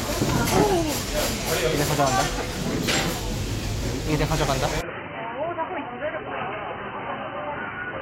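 Input switched to a poorer device, from 4.81 s to the end: at that moment the sound abruptly turns dull and boxy, with nothing above 3 kHz, and drops a few decibels in level. There is no gap at the change. A fresh, faint noise floor appears well beneath the signal. This sudden narrowing of the band, together with the new tone and noise, most likely comes from the recording input moving mid-take to a lower-grade microphone or a headset call profile.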